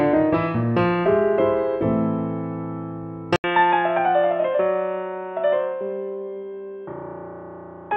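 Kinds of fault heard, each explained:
Input switched to a poorer device, at 3.36 s: after an 80 ms gap, the sound loses everything above 3.8 kHz and gets quieter, likely another input taking over.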